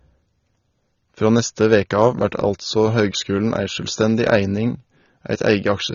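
Right through the speech there's nothing above 6.9 kHz and a dull, warbly smear, likely AAC compression at a low bitrate, something like 24 kbps.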